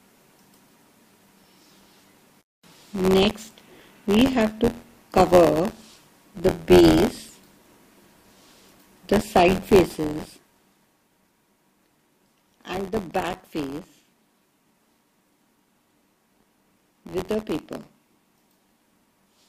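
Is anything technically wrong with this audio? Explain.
Yes, buffer tearing runs throughout: the writer and reader have slipped, so a small slice of each buffer replays audio roughly 20 ms old. The hard joins make a rattling 86.1 Hz buzz, which fits a 512-sample buffer. Unlike dropouts, nothing goes silent; the buzz simply follows the signal, even through its smooth level changes.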